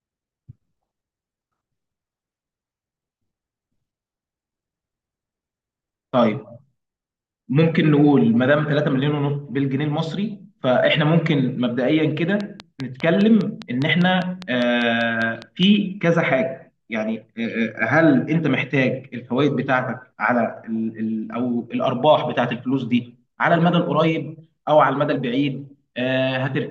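From 12.41 to 15.64 s the speech carries a train of clicks: some fifteen near-identical pulses at a steady 5 per second, each poking up to around 10 dB above the speech and audible in the gaps between syllables too. The likely cause is interference or a faulty connection or power supply injecting pulses. Unlike random crackle or isolated dropout pops, these keep an even rhythm and a matching shape, which gives the ticking quality.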